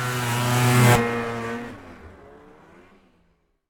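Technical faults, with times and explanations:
0.95 to 0.97 s, skip ahead: A stretch of audio was lost, either in transit or discarded by the jitter buffer when it overflowed, while later audio was already queued. Playback therefore leaps past around 0.7 s of material with no gap inserted, and the sound before the jump is butted almost directly against the sound after it. The result is an abrupt forward jump rather than a silence, and the receiver's delay drops by roughly the same amount.
1.01 to 2.81 s, jitter buffer speed-up: Right after the jump the jitter buffer was still holding more audio than its target, so the receiver trimmed the excess by repeatedly cutting out short slices one or a few pitch periods long. About 0.4 s was removed in total across this span. Because whole pitch periods are taken out, the pitch stays put while the timing compresses to 124% speed, well past the point where audio starts to sound rushed.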